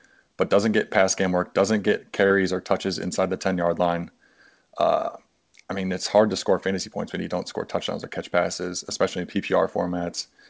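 Short concealed packet loss occurs at about 2.27 to 2.33 s, between "game work doesn't get" and "or touches inside the". Around 30 ms of the speech never reached the decoder in time, so the receiver filled the hole with its own guess, carrying forward the last sound before fading back into the real signal. It comes across as a brief smeared blip in the speech. Through the call path the audio has nothing above 8 kHz, which fits a wideband G.722 codec.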